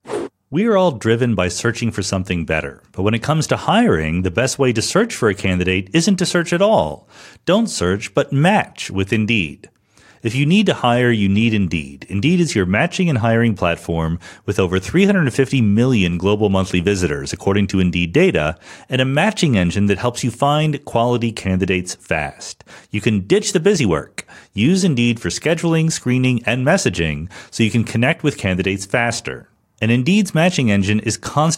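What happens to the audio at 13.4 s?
Nothing goes wrong at 13.4 s; the speech carries on intact through that moment, with no dropout, click, distortion or other fault.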